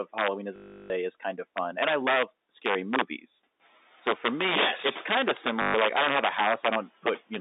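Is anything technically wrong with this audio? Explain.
Yes. Two faults are audible in this speech.

Integer overflow runs through the whole clip. Loud peaks are driven about 8 dB past the integer limit and wrap to the opposite sign instead of being limited. A small share of samples is affected. Each one sounds like a violent crack, much harsher than clipping.

Packet loss with the last packet repeated occurs from 0.56 to 0.90 s (340 ms) and from 5.62 to 5.74 s (120 ms), just after "yes it's kind of". Missing audio is filled by replaying the previous packet. The buzz suggests 20 ms packets. It sounds like a robotic 50 Hz stutter.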